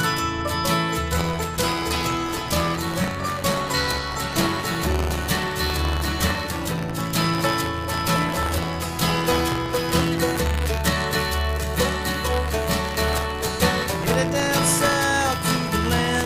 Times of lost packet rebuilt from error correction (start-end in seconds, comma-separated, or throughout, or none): none